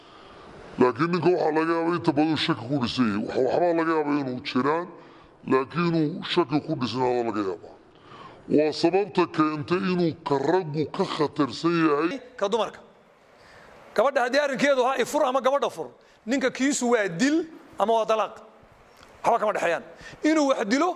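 Wrong sample rate from 0.0 to 12.11 s. The samples are clocked out more slowly than they were captured, with no conversion, so the sound runs at two-thirds speed and sits 7 semitones low. This fits 48 kHz material played at 32 kHz.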